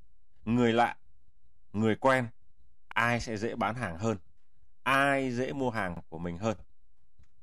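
At 2.92 s the speech stutters briefly, and again at 5.97 s. These are overlapping chunks. The audio was handled in 3-second blocks, each starting before the previous one ended. So 50 ms is played twice at each join. The doubled sliver sounds like a quick hiccup.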